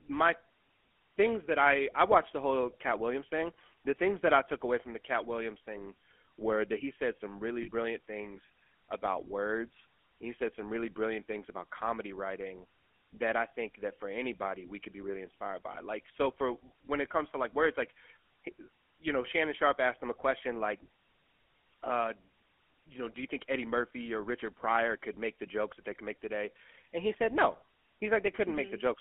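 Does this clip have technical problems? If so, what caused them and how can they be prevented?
Yes. The whole clip carries GSM full-rate codec damage: a buzzy, gravelly roughness in the speech, band-limited to roughly 250 Hz to 3.4 kHz, which fits a 13 kbps full-rate GSM link. Using a wideband codec or a VoIP or recorded path avoids it.

There are also lost GSM frames at 7.62 to 7.69 s and 15.72 to 15.76 s. The decoder held the last good frame, so each gap comes out as a short rough, metallic ring. The first sounds like about 60 ms of missing audio and the second about 20 ms. A stronger signal or a less congested connection would cut those frame losses.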